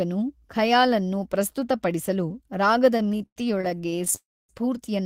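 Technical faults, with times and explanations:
2.97–4.14 s, repeated stalls (stutter): Just after "ಅನ್ನು ಪ್ರಸ್ತುತ ಪಡಿಸಲು ರಾಗದ", the speech keeps catching with 22 short gaps, the longest 102 ms, about 367 ms in all. Each gap is filled by stretching the last sound, so the speech drags without losing anything. Unlike a single freeze, this is many brief hitches.
4.16–4.51 s, call audio freeze: The speech halts once for about 330 ms. The last sound carries on briefly, then drops to silence for about 270 ms, and the speech resumes where it stopped with nothing missing. The likely cause is packets held up in transit, emptying the jitter buffer. Unlike the stutter, this is one long hold.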